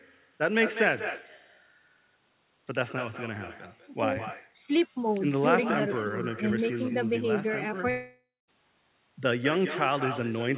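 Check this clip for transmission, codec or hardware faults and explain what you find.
Two faults are audible in this speech: a persistent echo from the far end and a long gap near the end.

Echo with no canceller runs through the whole clip. Each phrase is trailed about a fifth of a second later by a thinner copy sitting about 10 dB below the direct speech. This happens when the far end plays the call through a loudspeaker, its microphone picks that playback up, and no echo canceller removes it. The sound then returns after the network round trip.

At 7.9 s the speech breaks off and the final sound is stretched into a buzzy, fading continuation. That gives way to about 0.2 s of silence before audio resumes at 8.5 s, with roughly 0.58 s of material simply gone. This is likely a long network dropout: no packets arrived, so the receiver concealed the gap by extending the last sound until it ran out, then went quiet. 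The signal picks up after the gap, without replaying the missing part. Throughout, nothing sounds above 4 kHz, which fits a narrowband G.711 call.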